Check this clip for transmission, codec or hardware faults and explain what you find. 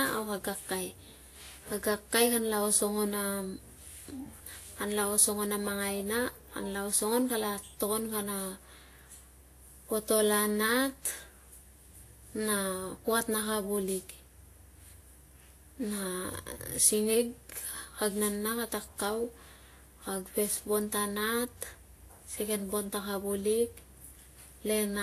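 The speech carries one fault for its whole length: transcoding between lossy codecs. From start to finish the sound has two layers of coding damage at once. There is a smeary, swirling quality of the kind a low-bitrate Vorbis encode leaves, topped by a second, different graininess that points to a later WMA pass. The likely cause is a file encoded once at a low rate, around 35 kbit/s, and then re-encoded to WMA at a higher rate near 96 kbit/s. The second encoder spent its bits preserving the first one's artefacts instead of removing them. On a spectrogram, energy stops flat at about 14.2 kHz, with patchy, holed texture below it. The waveform shows nothing unusual.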